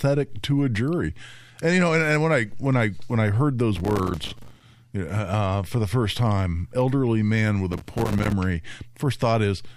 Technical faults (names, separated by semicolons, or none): processor overload crackle